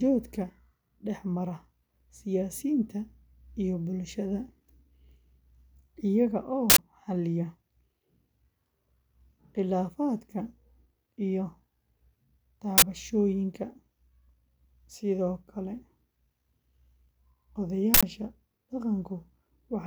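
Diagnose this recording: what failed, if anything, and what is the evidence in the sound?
An uninitialised buffer at the driver or buffer stage causes harsh noise bursts at 6.70, 12.78 and 17.94 s, lasting 85, 43 and 85 ms. These are whole blocks of leftover memory played as samples. Unlike dropouts, which fall silent, these blast loud.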